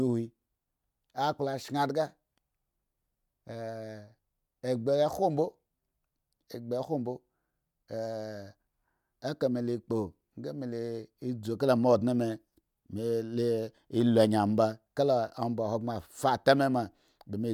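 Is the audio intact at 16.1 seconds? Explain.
Yes, the audio is intact at 16.1 seconds, with no fault audible at that moment.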